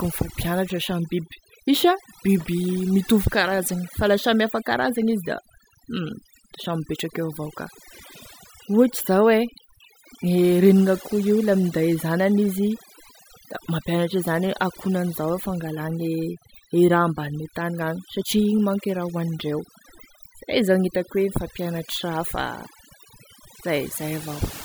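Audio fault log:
Throughout, overdone noise removal: the denoiser's cranked too hard, gating bands near its noise estimate, so the background's twinkly near-silence.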